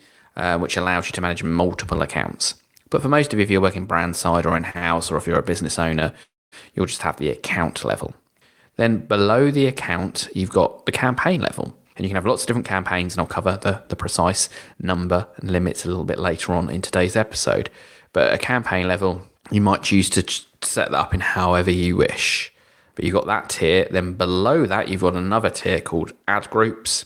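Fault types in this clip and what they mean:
Short stall from a late packet: two brief holds at 4.71 and 4.78 s, about 37 and 35 ms each, stretch the speech in place without silence, unlike a freeze.
Call audio freeze: at 6.23 s, before "you'll just have the", a 0.29 s gap, mostly silent, likely from packets held up in transit, longer than a stall.
Jitter buffer speed-up: speech from 11.29 to 15.45 s runs 5% fast, sounding hurried, and from 18.06 to 18.85 s 4% fast, at unchanged pitch rather than interrupted.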